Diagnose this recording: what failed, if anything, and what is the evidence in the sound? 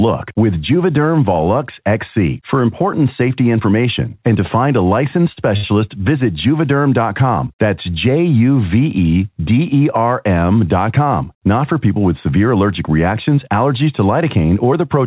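The failure is at the network and jitter buffer stage: two short stalls from late packets. Both come just after "to find a licensed". The first runs from 5.32 to 5.38 s, the second from 5.56 to 5.65 s. Each time a packet was late and the buffer ran empty. The receiver stretched the last sound by 44 ms, then 68 ms, and resumed in place. Nothing is lost, but the sound is held too long. The band stops at 4 kHz, consistent with a G.711 mu-law call path.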